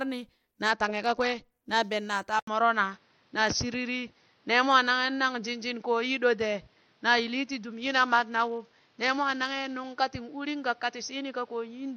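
It's a speech clip with two problems. From 0.70 to 1.51 s, just before "na ben naa taa", there's a Bluetooth SBC bit pool drop: the treble goes dull and a gritty, grainy noise creeps in, then it clears. That's what you get when a congested link forces the encoder to starve its bit allocation. The top sub-bands lose their bits and everything else gets quantised coarsely. The depth of the damage fits a drop from a bit pool of around 28 down to 8, roughly 72 kbps. The same thing happens again from 7.73 to 9.94 s. Then, right after "na ben naa taa", at 2.39 s, there's a short gap of about 80 ms, and from there to the end the sound is narrower and boxier, with nothing above 6.2 kHz. The level shifts by a few decibels and a new noise floor appears, sitting well down, around 40 dB under the speech. That's likely the input switched to a poorer device partway through, either another mic or a headset dropping into its call profile. 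The narrower band, the different tone, the level step and the fresh background noise all come with the new device.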